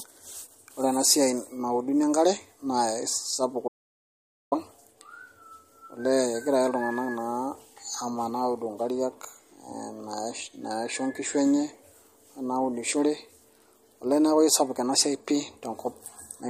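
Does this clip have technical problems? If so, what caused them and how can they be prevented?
Yes. The whole speech clip carries plainly audible MP3 compression, which likely comes from encoding at a low bitrate in the region of 48 kbps. Nothing sounds above 15.2 kHz. The encoder is short of bits, so it drops quiet frequency detail. That detail flickers in and out between frames. The result is a watery, swirling texture, with smeared consonant attacks. To prevent it, encode at a higher bitrate or keep a lossless master.

From 3.68 s to 4.52 s there is an audio dropout to silence. The sound stops dead for about 0.84 s. Nothing remains in the gap, not even room tone. That points to the input signal being lost while the recorder kept writing zeros, likely through a loose connection or a momentary mute. Whatever happened in that gap is gone. To prevent it, secure cables and monitor input levels during recording.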